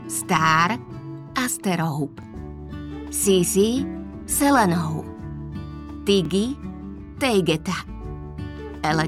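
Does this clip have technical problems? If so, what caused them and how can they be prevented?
Yes. The audio has overlapping chunks: it was handled in 4-second blocks, and each block began about 25 ms before the previous one finished, so that sliver plays twice at each join. This shows up as a brief stutter or click at 2.23 s and again at 6.25 s, about 4 s apart. Preventing it means aligning chunk boundaries so each block starts exactly where the last ended, or trimming the overlap before playback.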